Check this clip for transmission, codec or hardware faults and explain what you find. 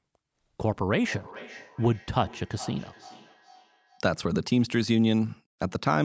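One fault is present: a feedback echo between two devices. From 1.02 to 4.06 s the speech comes back roughly every 0.4 s, thin and ringing, about 20 dB below the speech. Two devices share the call in one room. One plays the other's microphone signal, which that microphone picks up again, and neither echo canceller removes what the other device plays.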